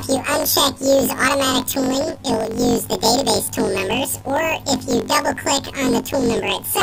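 Throughout the clip, planar audio is read as interleaved. Each 21.77 ms block stores all left samples, then all right samples. The player takes them as alternating pairs instead. So each block plays twice at double speed, first the left half, then the right. The overall pace stays correct. The sound is shifted up a full octave, 12 semitones. A rough flutter rides on it at the block rate of 45.9 Hz.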